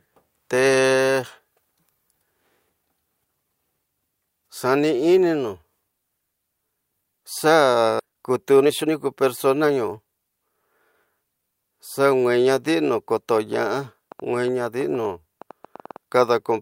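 At about 7.99 s there's a skip ahead: roughly a second of speech got dropped while later audio was already queued, so playback jumps straight across with no gap. Right after, from 8.05 to 10.13 s, comes a jitter buffer speed-up. The overfull buffer trims tiny pitch-period slices over and over, so speech runs at 123% at unchanged pitch and sounds hurried, shedding around half a second. Then just after "naadi na", from 13.36 to 15.97 s, there's a train of clicks, about 6.5 per second at an uneven pace, roughly twenty in all, popping about as loud as the speech. It's likely interference or a faulty connection.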